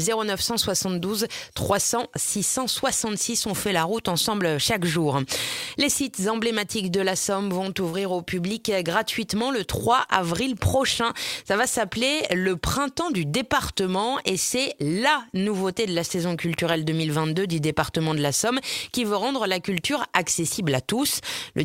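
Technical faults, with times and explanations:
7.89 to 7.95 s, short concealed packet loss: about 40 ms of audio arrived too late for the decoder, so the receiver extended the preceding sound to cover the gap and then crossfaded back, leaving a brief smeared or wobbling patch where the original detail is missing.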